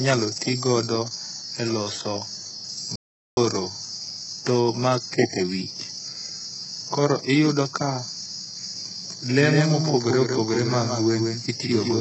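HE-AAC compression runs through the whole speech clip. The heavy, gritty treble and the lack of anything above 8 kHz point to a very low bitrate, likely around 8 kbps. The upper band is rebuilt from copied lower bands, so s sounds come out lispy and metallic.

An audio dropout to silence runs from 2.96 s to 3.37 s. For about 0.41 s the sound stops completely, with no room tone underneath, and then resumes mid-flow. The input was likely lost briefly while the recorder kept writing silence, so that stretch of speech is gone.

A doubled audio track begins abruptly at 9.25 s and lasts to the end. A second full-band copy of the speech follows roughly 150 ms behind, about 5 dB quieter, with no decay or room colour. This is likely a second, slower capture path mixed in alongside the first.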